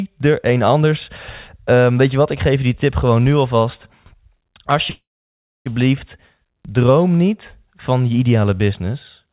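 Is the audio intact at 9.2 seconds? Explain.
Yes, the speech at 9.2 seconds is intact, with no fault there.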